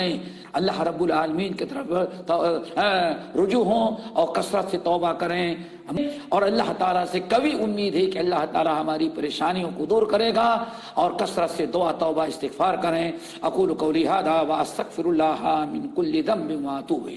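No technical faults can be heard anywhere in this clip.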